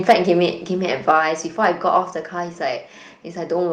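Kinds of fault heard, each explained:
Microphone overload, 0.08 to 0.13 s and 1.09 to 1.11 s: the loudest peaks are flattened into a harsh crackle. The first burst runs about 8 dB past the limit with a sizeable share of samples squared off, and the second about 2 dB with only a few. This is likely input volume set too high for the converter.
Microphone volume stepped down, at 0.11 s and 1.11 s: during the first distorted peak and right after the second, the whole signal, voice and background together, drops abruptly by about 3 dB and then about 4 dB. This is likely the call software cutting the device's input volume in single steps.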